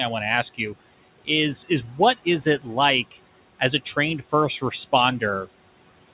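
Noise suppressor artifacts run through the whole clip. The room noise, about 19 dB below the speech, is pushed down by about 18 dB in the gaps and swells back under each phrase. On a spectrogram the noise floor pumps between frames, leaving patchy speckles instead of an even haze.

From 1.88 to 1.99 s, between "is is" and "is it", the noise suppressor cuts speech it mistook for noise. For about a tenth of a second the sound is turned down by up to about 6 dB and sounds swallowed. The waveform shows a brief dip in envelope, and on the spectrogram the speech energy thins there. Nothing appears above 4 kHz, a ceiling set by the G.711 call path.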